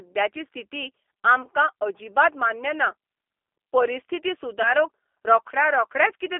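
The whole clip runs through a G.729 codec at 8 kbit/s, squeezed into a 300 Hz to 3.5 kHz line band, so the speech sounds noticeably rough and synthetic. Around 1.42 to 1.48 s, just before "अजिबात मान्य ना", and again around 4.62 to 4.72 s, VoIP packet loss concealed by the speech codec leaves a 20 ms hole each time, which fits a single lost packet. The decoder patches it with a brief smear of stretched sound that takes a moment to recover.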